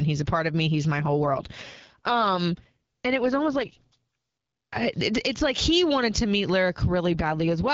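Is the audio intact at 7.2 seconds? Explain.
No. Just after "he wanted to meet", from 7.05 s to the end of the clip at 7.74 s, there is an AMR rate drop. The AMR wideband codec switches to a lower rate and spends the freed bits on error protection, so the bandwidth holds and nothing drops out, but the speech turns rough and synthetic and raspy. The degradation fits a step down from 12.65 to 6.6 kbit/s.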